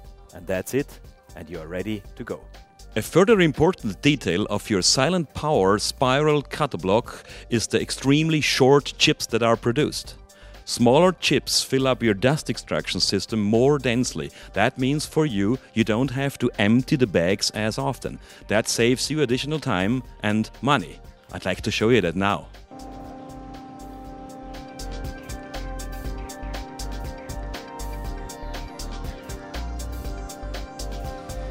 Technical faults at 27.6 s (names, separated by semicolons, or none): none